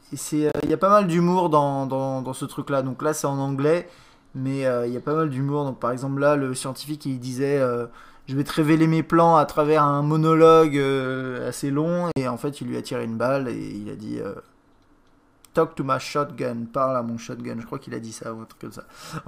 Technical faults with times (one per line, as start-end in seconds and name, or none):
0.49-0.70 processor overload crackle
12.12-12.20 Bluetooth dropout